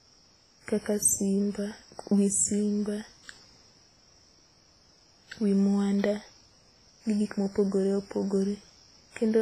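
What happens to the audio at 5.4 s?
At 5.4 s the speech carries the artefacts of its first encoding, as it does for the whole clip, with nothing above 15.3 kHz. This is low-bitrate audio saved at a high bitrate, likely a heavily compressed first encoding near 24 kbit/s later re-saved as high-rate MP3, which cannot restore what was discarded.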